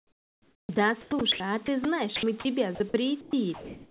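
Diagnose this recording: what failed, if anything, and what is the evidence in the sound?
The speech is chopped by the voice detector, likely at the sender's call-processing stage. From 0.0 to 1.4 s, about 1.05 s is swapped for comfort noise. Shorter cuts follow at 1.66 to 1.85, 2.16 to 2.45 and 2.75 to 2.94 s. Quiet word edges drop to synthetic hiss.

From 3.21 s to the end, comfort noise replaces the background, likely because discontinuous transmission stopped sending once the speech ended. About 0.58 s of real room sound becomes flat, featureless noise. The whole clip stops at 4 kHz, which fits a G.711 narrowband call codec.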